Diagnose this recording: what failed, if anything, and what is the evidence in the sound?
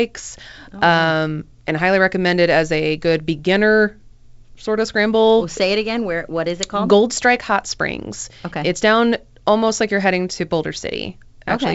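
Nothing failed at any stage; the speech sits in the wideband G.722 telephone path at 64 kbit/s, with the full band up to about 7 kHz present and any coding trace in the upper band faint at most.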